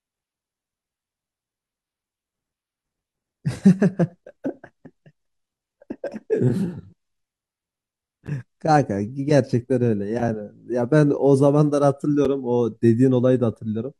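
At 4.25, 8.27 and 12.25 s, gaps between stream segments insert hard-edged silences of 10, 12 and 6 ms. Mistimed segment boundaries leave holes, visible as thin blank vertical strips on a spectrogram.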